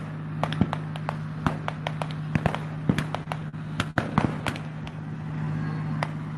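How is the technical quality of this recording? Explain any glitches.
Three short stalls from late packets occur in a row mid-clip, heard through a call codec whose band stops around 12 kHz.

Short stall from a late packet, at 3.23–3.28 s, 3.49–3.55 s and 3.91–3.98 s: each time the jitter buffer ran dry, so the receiver stretched the last sound for 26, 40 and 52 ms before resuming at the same point. Nothing is lost, but each held moment adds to the delay, which grows to 118 ms by the third stall.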